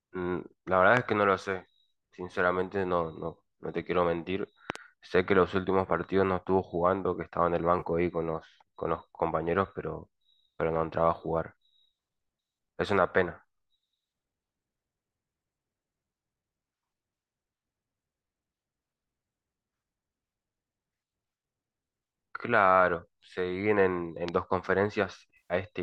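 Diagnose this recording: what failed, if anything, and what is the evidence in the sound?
Loud pops, likely from a voltage step in the analogue wiring or driver. Sharp thumps sit at 0.97–0.99 s (about 20 dB up), a double pop at 4.70–4.78 s, and 24.28–24.31 s.

AAC frame loss with concealment, at the network and codec stage. At 7.79 s a 30 ms gap smears. At 25.37–25.54 s, 130 ms of extrapolated spectrum fades and returns.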